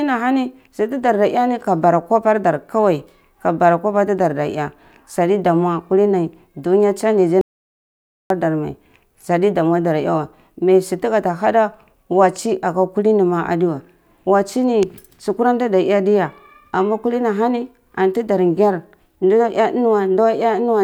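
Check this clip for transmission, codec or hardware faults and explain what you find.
There is one fault in this speech clip, an audio dropout to silence from 7.41 to 8.30 s. The input feeding the recorder was most likely lost, through a disconnected device, a failed link or a mute, while writing carried on with silence. Right after "kulin dunya changyzy" the speech stops abruptly and the level falls to silence with no room tone, then returns mid-flow. About 0.89 s of what was said is missing.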